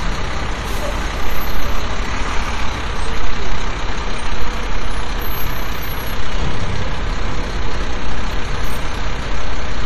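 From 1.61 s to 9.02 s, a short click repeats every 2.46 s, about four times in all. These are clock drift buffer slips. Two clocks likely disagree by roughly 500 ppm, so a small block of samples is dropped or repeated.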